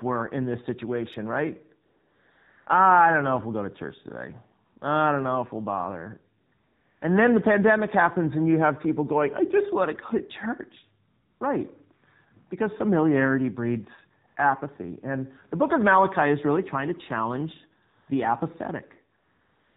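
From start to finish the speech sounds buzzy, thin and somewhat synthetic, with nothing above 4 kHz. This is the AMR narrowband mobile codec at a low rate. The damage level fits roughly its 7.4 kbps mode, where few pulses per subframe model the voice.

In the pauses, the real background is swapped for a smooth, steady hiss that switches in and out at 1.86–2.66, 4.66–4.76, 4.78–4.82, 6.54–7.02, 11.08–11.40, 14.28–14.36, 17.88–18.08 and 19.18 s to the end. This is AMR comfort noise. The phone stopped sending speech frames, and the receiver synthesised filler noise.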